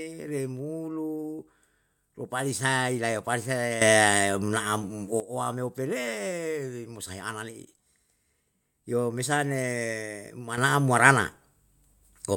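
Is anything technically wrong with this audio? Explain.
Yes. At 3.82 s the speech and its background noise leap up together by about 12 dB, staying loud until 5.20 s, and at 10.58 s the same happens again, about 9 dB louder, through to the end. This is a sudden gain jump: the level changes instantly rather than fading. The likely cause is a digital gain setting or bit shift applied from one sample to the next with no ramp.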